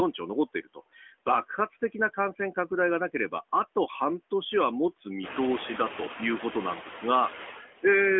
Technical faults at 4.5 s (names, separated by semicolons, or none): noise suppressor artifacts